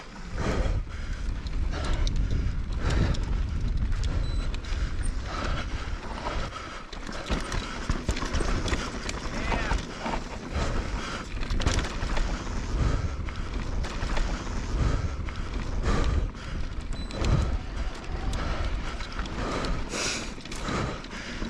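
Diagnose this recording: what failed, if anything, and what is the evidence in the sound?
Stream segment repeated at 13.81–15.81 s: the playback stage queued one segment twice, so two seconds of audio replay after a small blip at the jump back.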